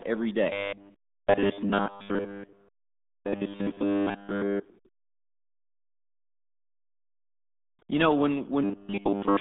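From the first moment the speech runs through the RealAudio 14.4 codec, and it sounds heavily damaged. There's essentially nothing above 3.8 kHz, and the usable band sits roughly between 150 Hz and 3.6 kHz, so everything comes across muffled and gargly. That narrow, smeared quality points to an 8 kbit/s dial-up-era speech codec squeezing the voice into very few bits, throwing away the upper spectrum and blurring consonants.

Right at the end, from 8.64 s to 9.41 s, the voice turns into a rigid, metallic robotic sound. It still roughly tracks the speech but sits on a fixed 100 Hz buzz. That's likely repeated short buffers: new audio isn't arriving in time, so the playback keeps looping a 10 ms chunk, which imposes that 100 Hz pitch, and around 70 percent of that stretch is repeats rather than real audio.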